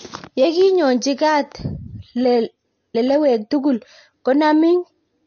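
Speech with plainly audible MP3 compression damage throughout: nothing above 6.6 kHz, plus watery, swirling artefacts, likely from a low bitrate around 34 kbps.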